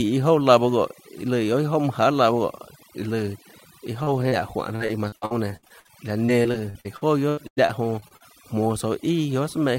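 Across the whole clip the background sits at near silence flecked with twinkling specks. This is overdone noise removal: an aggressive noise reducer pulled individual frequency bands down whenever they neared its noise estimate, taking quieter speech detail with them.

From 3.99 to 8.22 s the speech turns choppy and robotic, with fragments dropping out. This is repeated packet loss: 24 gaps, the longest 95 ms, each patched by extending the preceding sound, together covering about a fifth of that stretch.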